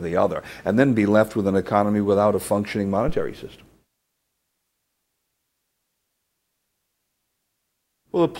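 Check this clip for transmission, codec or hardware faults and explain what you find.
One hardware fault stands out. From 3.08 to 3.40 s a deep thump rises to about -15 dBFS and dies away with a 70 ms decay. This is a phantom power thump: switching a supply on a live input sends a voltage step through the coupling capacitors.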